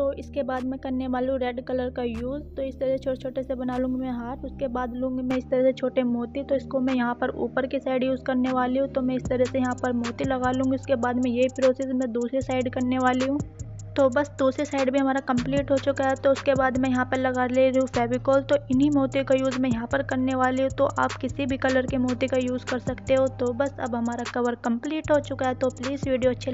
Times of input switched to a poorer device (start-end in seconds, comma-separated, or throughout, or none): 5.31-26.53